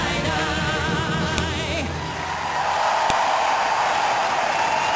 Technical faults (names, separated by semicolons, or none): file header played as audio